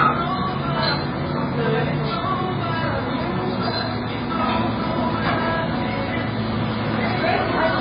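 From start to finish the audio sounds dull and watery, with a swirling, chirpy texture and smeared attacks, and nothing above 5 kHz. Heavy MP3 compression is the likely cause: the encoder cut the treble and dropped weak frequency content, which fits a very low bitrate around 16 kbps.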